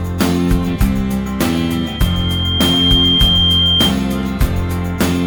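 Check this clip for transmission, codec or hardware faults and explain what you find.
One fault is present: loudspeaker feedback squeal, from 1.51 s to 3.96 s. A microphone was picking up the loudspeaker it feeds, and at 3.2 kHz the gain around that loop exceeded one, so that frequency reinforced itself on every pass. The tone rises over roughly a second and a half, swelling into a steady, piercing squeal that ends up about 5 dB louder than the surrounding audio before it cuts off at 3.96 s.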